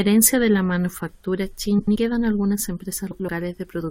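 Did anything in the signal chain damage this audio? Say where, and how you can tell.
Yes. Frames out of order, from the network or packet handling. The speech garbles from 1.79 to 1.96 s and from 3.11 to 3.28 s. Two neighbouring blocks of about 85 ms were swapped. That fits four-frame runs. No time is lost.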